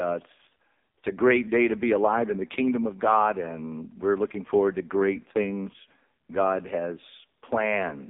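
From start to finish the speech passes through the AMR narrowband mobile codec, heard as a thin telephone band from roughly 250 Hz to 3.7 kHz, with nothing at all above 3.8 kHz. The codec rebuilds the voice from a coarse vocal-tract model fed by sparse pulses, and here the damage is heavy: buzzy and synthetic, which fits AMR-NB's low 5.15 kbit/s mode. A spectrogram shows a hard ceiling near 3.8 kHz and smeared, blocky harmonics.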